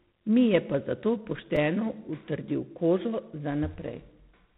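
From the start, the speech carries G.726 ADPCM damage: a harsh, rasping hiss that rises and falls with the speech level, and nothing above 3.9 kHz. This points to coding at 24 kbit/s, where each sample is stored as too few bits of difference from a prediction. Unlike steady background hiss, this noise comes and goes with the speech.

At 1.56 s, between "je pa zato" and "utrdil kožo", there is a repeated buffer. New audio arrived late, so the last block of about 5 ms was played twice more. Because the block is so short, it comes across as a brief buzzy click rather than an audible stutter. It differs from a dropout because no audio goes missing.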